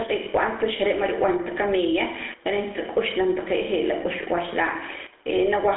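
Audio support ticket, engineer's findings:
Gain pumping, whole clip. Level swing of around 10 dB. Mic gain most likely set far too hot, with a fast limiter or compressor clamping down on each loud bit. Result is squashed dynamics, loud and quiet parts pushed close together; the room noise itself sits about 43 dB under the speech.

GSM full-rate codec artefacts, start to end. Buzzy, gravelly roughness on the speech, plainly audible. Band sits roughly 300 Hz to 3.4 kHz, nothing at all above 3.8 kHz, which fits a 13 kbps GSM full-rate leg in the call path. The rasp comes from the codec rebuilding the voice from a vocal-tract model driven by a coarse, evenly spaced pulse train instead of the real excitation. The mic processing only high-passes the lowest bass, which is normal.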